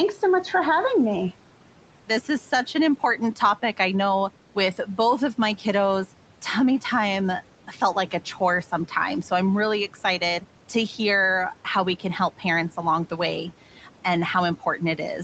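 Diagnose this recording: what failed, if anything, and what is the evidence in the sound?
The failure sits in the call processing stage, where a noise suppressor has left audible artifacts throughout. The room noise, about 20 dB below the speech, is pulled down by about 12 dB in the pauses and comes back up underneath the talking, so the background pumps with the voice. On a spectrogram the noise floor shows as patchy, blotchy cells that thin out between phrases and fill in under them.

The same suppressor also produces speech cut by the noise suppressor, briefly, from 13.76 to 13.88 s. Over roughly a tenth of a second it mistakes low-level speech energy for noise and attenuates it by up to about 8 dB, so that part of the speech sounds swallowed and faint. The waveform shows a short dip in the envelope there, and the spectrogram shows weakened, hollowed-out speech bands for that instant. 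The band limit at 8 kHz is the call's normal microphone processing, not part of either fault.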